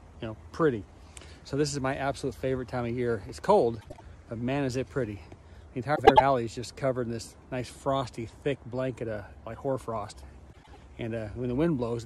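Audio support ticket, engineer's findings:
Frames out of order at 3.81–4.02 s, 5.95–6.21 s and 10.52–10.78 s. Symptom: garbled flutter and no lost time. Probable component: jitter buffer or packet reassembly. Two adjacent runs of frames are decoded in swapped order, so each stretch plays with its halves exchanged. The swapped blocks are about 78 ms in the first event and about 105 ms in the other two, which fits runs of 26 ms codec frames.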